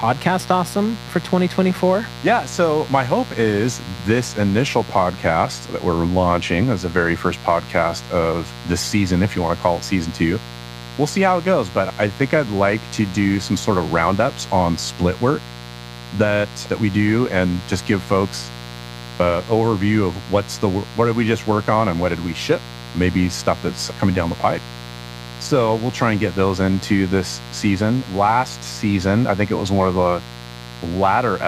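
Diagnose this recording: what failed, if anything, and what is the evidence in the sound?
Mains buzz runs under the speech for the whole recording, a steady raspy tone sitting only about 15 dB below the talker. Its fundamental is 60 Hz, with a dense stack of harmonics reaching well into the kilohertz range. The fault is in the analogue wiring stage. A poorly shielded cable or switching interference from a dimmer or rectifier injects sharp spikes twice per mains cycle, and those spikes produce the buzz's edge.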